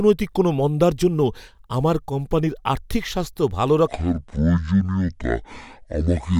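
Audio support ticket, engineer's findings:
Section at the wrong speed, 3.87 s to end, after "কোম্পানির আর্থিক স্বাস্থ্য ভালো": likely a playback clock mismatch running that part at 0.53x; speech drops roughly ten semitones, slow and deep.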